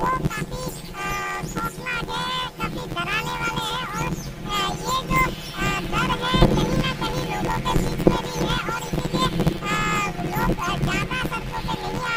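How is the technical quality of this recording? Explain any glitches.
The recording has a channel-layout fault from start to finish: planar audio read as interleaved. Stored blocks, each likely 512 samples or about 11.61 ms, hold all left samples and then all right samples, but playback reads them as alternating pairs. Each block therefore plays twice at double speed, first left and then right. Because the blocks are so short, the result is a robotic buzz at about 86.1 Hz rather than a clear octave jump. That buzz, locked to the block rate with no octave shift, is what separates it from a simple pitch-shift error.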